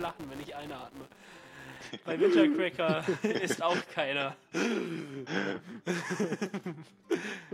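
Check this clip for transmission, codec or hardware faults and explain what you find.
There's one fault, and it sits right at the start. From 0.0 to 1.88 s you get a filter restarted on every block: the filter is dropping its memory between processing blocks and starting each one as if the input had been silent. That leaves a little transient at every block edge, so you hear a 200 Hz buzz, which points to blocks about 5 ms long, rising and falling with the sound's level underneath.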